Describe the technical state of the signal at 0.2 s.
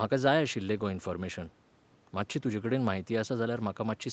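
At 0.2 s the speech signal is intact, with no fault present, only the expected call-path band limit of 8 kHz.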